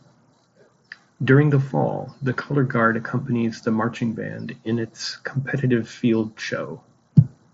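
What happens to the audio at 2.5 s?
Nothing goes wrong at 2.5 s: the speech passes through intact, carried by the Bluetooth mSBC headset codec with its band stopping around 7.7 kHz.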